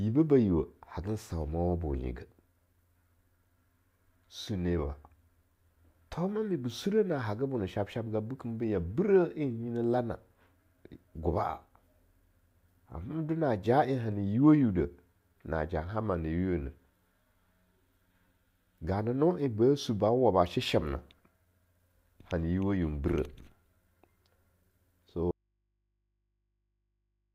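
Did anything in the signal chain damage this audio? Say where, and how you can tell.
Yes. At 25.31 s the speech cuts out abruptly and never returns. An audio dropout to a faint residue runs to the end, leaving only mains hum roughly 50 dB below the signal. The likely stage is analogue wiring, an open input picking up hum.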